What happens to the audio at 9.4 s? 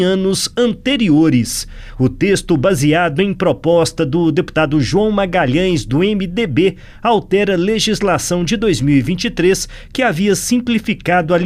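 Nothing goes wrong at 9.4 s: the audio plays through that moment intact, with no dropout, click or other fault.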